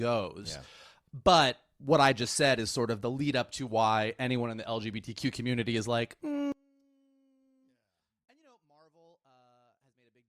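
From 6.52 s, right after "community is like", the speech falls by about 38 dB and stays almost gone to the end, leaving only a faint residue. The likely cause is one channel inverted: with one side's polarity reversed, the centred voice cancels when the two channels are summed to mono. On a waveform the envelope collapses to a sliver at that moment. A spectrogram shows the energy, low end included, sinking almost to the noise floor.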